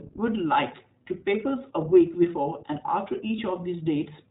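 Throughout the speech there is a slightly rough, synthetic quality and nothing above 4 kHz, so sibilants lose their edge and the sound is narrow and boxed in. The damage is plainly audible. This is the iLBC codec at work. It squeezes speech into the narrowband range and codes each frame's excitation on its own. The character fits 20 ms frames at the 15.2 kbps rate.

From 3.28 to 3.30 s a brief, faintly buzzy held sound replaces the speech, lasting about 20 ms. This is a lost iLBC frame, consistent with a single missing packet. With no real data for that slot, the decoder repeats the last pitch cycle blended with noise. Because the next frame decodes without relying on the one before, clean speech resumes straight after the gap.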